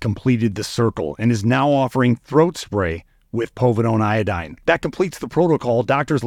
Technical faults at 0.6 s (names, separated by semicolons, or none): none